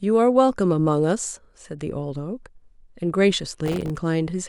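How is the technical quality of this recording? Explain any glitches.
Processor overload crackle runs from 3.66 to 3.96 s, near the end of the speech. The processor fell behind and repeatedly missed the deadline for filling its very short audio buffers, on the order of a millisecond or two each. Every missed buffer came out as a sliver of silence with abrupt edges. Packed together, roughly twenty such dropouts in about 0.3 s produce a gritty, tearing crackle over the speech that stops once the load eases.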